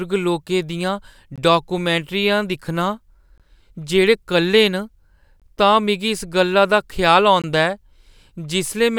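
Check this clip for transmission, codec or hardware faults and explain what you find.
The clip has one fault, a gap between chunks, at four joins: 1.36–1.38 s, 3.38–3.40 s, 5.40–5.42 s and 7.42–7.44 s. The speech arrives in 2-second chunks with 20 ms of silence between them. Nothing is lost, but each join becomes a short hole that recurs at a steady rhythm.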